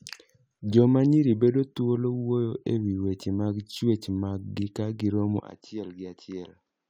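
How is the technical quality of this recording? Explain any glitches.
One glitch spoils the recording near its end. From 5.4 s, right after "gi ka gi romo", to the end, the input likely switched to a poorer device. The speech suddenly loses everything above 7.6 kHz, drops roughly 10 dB, and takes on a new faint noise floor about 50 dB down, with no gap at the switch. A simple filter or gain change would not bring in a different noise floor along with the duller tone.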